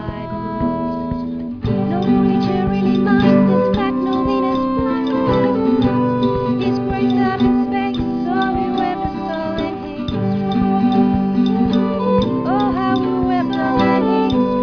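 No technical faults can be heard anywhere in this audio.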